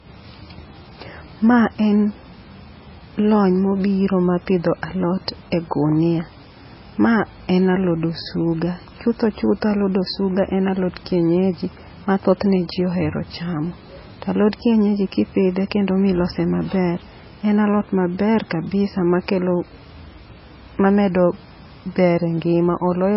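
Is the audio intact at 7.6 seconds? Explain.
No. At 7.6 seconds the speech carries the same damage it has throughout the clip. Nothing is heard above about 5.5 kHz, so sibilants and air are missing. Smeared, watery artefacts cling to the speech. This is low-bitrate audio saved at a high bitrate. The sound was likely first squeezed by a very low-rate MP3 encoder, around 16 kbit/s, then re-encoded at a much higher rate. The second pass kept the losses and restored nothing.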